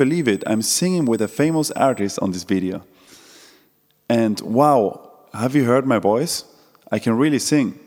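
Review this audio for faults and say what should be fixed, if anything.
There's USB whine from 0.0 to 2.0 s, a steady 8 kHz tone about 25 dB under the speech, from the bus's 125-microsecond microframe current pulses leaking through power or ground. To prevent it, power the interface separately or add a ground-loop isolator or ferrite on the USB line.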